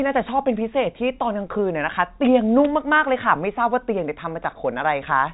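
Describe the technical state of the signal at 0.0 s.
At 0.0 s the speech is intact, carrying only the narrow telephone band of G.711 coding, with no dropout, click or distortion at that point.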